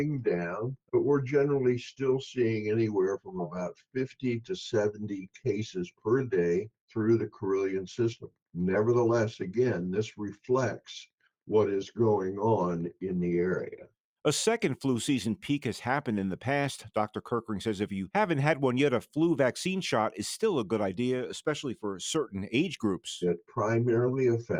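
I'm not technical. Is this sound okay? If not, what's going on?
Yes, it's fine; nothing here sounds wrong.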